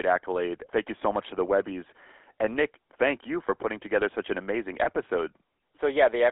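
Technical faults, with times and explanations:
throughout: GSM full-rate codec. The speech is squeezed into a 300 Hz to 3.4 kHz band with a plainly audible buzzy, gravelly roughness, consistent with a 13 kbps full-rate coder rebuilding the voice from sparse pulses. Plain band-limiting would sound muffled, not gritty.
4.84 to 4.89 s: lost GSM frames. The sound briefly freezes into a rough, metallic ring as the last good frame is repeated, which fits a single lost 20 ms frame. Unlike a dropout, there is no gap of silence, and the loss is too short to fade.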